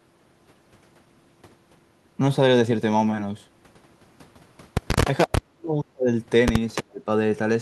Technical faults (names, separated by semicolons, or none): echo leak; speech suppressed in double talk